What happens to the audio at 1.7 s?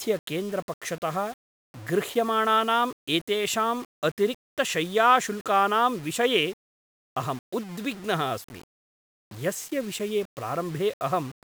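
At 1.7 s the speech is grainy, as it is for the whole clip. This is low bit depth without dither. The sound was likely rounded to about 7 bits with no added noise. The error tracks the signal, sitting roughly 25 dB down. Quiet parts turn gritty.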